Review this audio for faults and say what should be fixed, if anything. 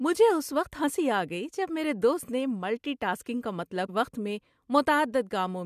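At 3.88 s the speech jumps abruptly ahead with a short blip, likely a stream segment skipped after one segment failed to load. Prevent it with retry on failed segment requests and a deeper playback buffer.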